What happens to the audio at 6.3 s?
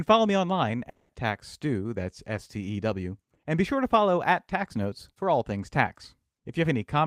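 Nothing goes wrong at 6.3 s; the speech there plays through cleanly, with no dropout, click or distortion.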